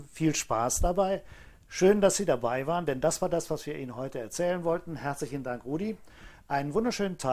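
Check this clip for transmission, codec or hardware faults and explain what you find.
No transmission, codec or hardware faults can be heard anywhere in the clip. There is nothing to locate or explain.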